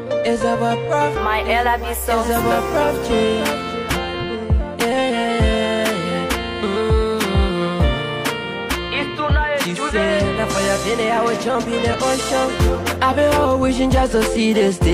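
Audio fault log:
3.07–3.12 s and 12.77–12.82 s, damaged data in a compressed stream: two brief glitches, of 50 ms and 44 ms, where corrupted bytes make the decoder misread frames and lose sync, heard as a chirp, squawk, click or short hole.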